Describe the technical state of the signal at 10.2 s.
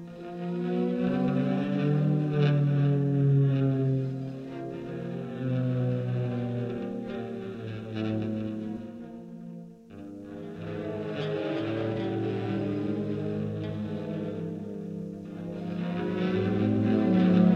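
At 10.2 s the audio is intact, with no audible dropout, click, distortion or other fault at that point.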